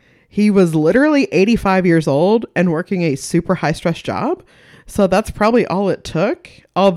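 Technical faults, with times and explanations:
0.57–0.97 s, 5.01–5.57 s and 6.84–6.89 s: hard clipping. Peaks pushed about 2 to 3 dB past the ceiling are sliced flat, adding a brittle crackle high in the spectrum only on the loudest moments, unlike soft saturation's rounded, warmer thickening.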